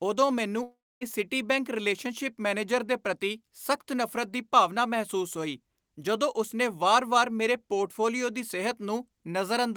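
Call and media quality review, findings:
Long network dropout, 0.63 to 1.03 s, between "ਉਦੋਂ ਮੈਨੂੰ" and "ਸਿਟੀਬੈਂਕ ਰਿਲੇਸ਼ਨਸ਼ਿਪ ਮੈਨੇਜਰ ਦੇ". About 380 ms of speech lost. Receiver concealment stretches the last sound into a fading buzz, then about 260 ms of near-silence before audio resumes past the gap. Likely cause: packet stream interruption on the network path, with the jitter buffer running dry.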